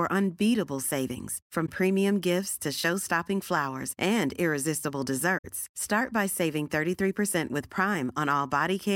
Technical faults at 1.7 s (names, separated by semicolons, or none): corrupt frame concealed